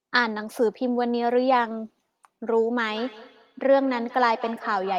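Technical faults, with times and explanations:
2.87 s to the end, feedback echo between two devices: the speech starts returning at a fixed spacing of roughly a fifth of a second, peaking about 18 dB below the direct sound and growing thinner and more ringing with each pass. A second device in the room replays this call, and this microphone picks that playback up again, which this side's echo canceller cannot remove. Unlike room reverberation, which smears sound into a smooth decay, these returns are distinct and evenly spaced.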